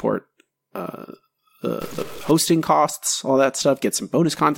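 Speech clip in which a data bit is likely stuck between 1.81 and 2.31 s, offsetting samples by a step of about -30 dBFS and adding harsh, buzzy distortion.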